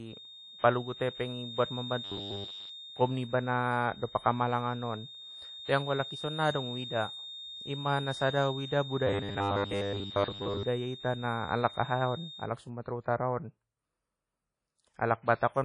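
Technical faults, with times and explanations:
Throughout: WMA compression, likely an older WMA encoder at a low rate, around 32 kbps. The transform blocks smear quantisation noise over tens of milliseconds, so the speech rings and sounds washy, with hiss that breathes along. Nothing comes through above about 10.1 kHz.
0.00 to 12.52 s: feedback whistle, a steady tone at 3.7 kHz sitting about 15 dB under the speech. The speaker-to-mic loop is likely hovering just short of runaway, so that one pitch keeps ringing without ever building into a howl.
2.04 to 2.69 s and 9.07 to 10.63 s: robotic sound from repeated short buffers. The speech turns into a rigid metallic buzz at 100 Hz. That fits roughly 10 ms chunks being replayed while most of the real audio, around seven tenths, is skipped, likely because data arrives too late.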